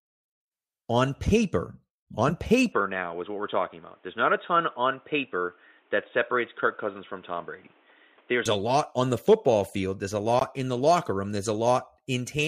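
From 2.72 to 8.46 s the speech turns dull and boxy, with nothing above 3.8 kHz and a new background noise well below the speech. The likely cause is an input switched to a poorer device, and the sound dulls just before "a lot on the". There is no gap and no level change at either switch. Unlike a plain low-pass filter, the tone and the noise floor change together at the same instant.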